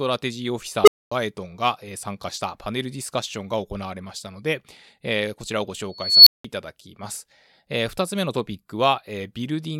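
At 0.84 s an unstable filter takes over the speech. A recursive filter has gone wrong and its output feeds on itself. A low tone, around 400 Hz, swells to clipping in about 35 ms. The numbers then overflow and the sound cuts out for 240 ms, ending at 1.12 s. At 5.95 s it happens again as a high squeal near 4 kHz. This one builds more slowly, over about 320 ms, then drops to 180 ms of silence, ending at 6.45 s.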